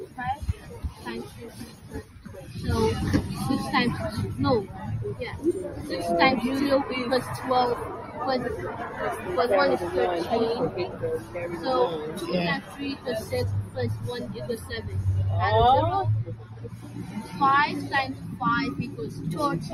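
Across the whole clip the level pumps and thins, with sustained material sinking while onsets stay intact. The swings reach roughly 15 dB. This comes from a noise suppressor applied to music or sounds. It is a processor tuned for speech that treats steady, held energy and decaying tails as noise and pulls them down.

The clearest moments of sound cut by the noise suppressor fall at 0.06–2.54 s, 4.66–5.82 s, 8.0–8.17 s, 10.88–11.58 s, 12.61–14.9 s, and from 16.24 s to the end. In these spans sustained passages dip by up to about 10 dB, 8 dB, 6 dB, 8 dB, 10 dB and 11 dB respectively. Their decays are cut short. The audible dropout adds up to around two seconds in both the first and last spans, about one second at 12.61 s, and fractions of a second elsewhere.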